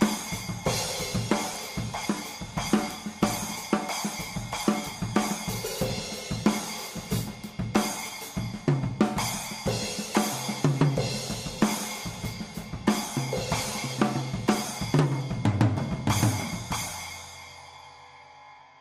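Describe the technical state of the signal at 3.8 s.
At 3.8 s the signal is intact, with no dropout, clipping, glitch or other technical fault to be heard at that point.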